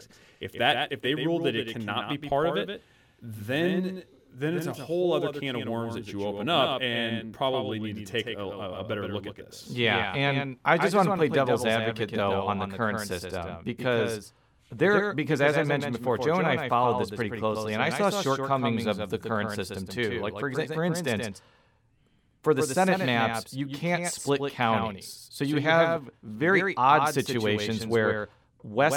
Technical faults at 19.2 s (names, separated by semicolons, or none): doubled audio track